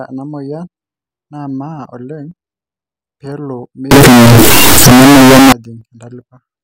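From 3.91 s to 5.52 s the speech turns into a blast of very loud, harsh distortion, the sound of signed and unsigned mixed up, likely with 16-bit samples read with the wrong signedness. Flipping the top bit makes every zero crossing leap across the whole range, so even quiet stretches come out as loud as peaks. Ordinary clipping would flatten only the loud parts and leave soft passages soft. Here the level floor itself collapses.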